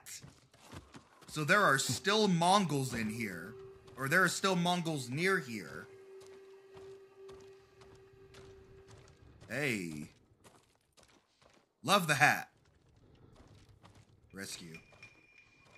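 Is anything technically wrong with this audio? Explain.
Yes. From 2.64 to 7.66 s there is sample clock jitter: timing wander of a few microseconds makes errors that scale with waveform slope, adding hiss around 30 dB below the signal.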